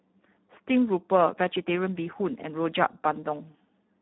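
Speex codec damage runs through the whole speech clip. The sound is hoarse and noisy, which fits a low setting near 8 kbps, where the CELP coder has too few bits to model the excitation. Nothing remains above 3.9 kHz, leaving it narrowband and dull.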